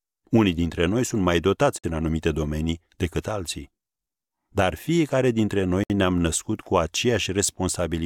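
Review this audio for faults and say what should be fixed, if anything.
Gaps at a join of encoded pieces break the speech at 1.78–1.84 s (53 ms) and 5.84–5.90 s (64 ms), 4 s apart. Each separately encoded chunk kept its leading encoder delay and padded last frame. These gaps show as thin blank vertical bands with slightly smeared edges on a spectrogram, or as flat dropouts in the waveform. To prevent this, trim encoder delay and padding before joining, or encode the stream in one pass.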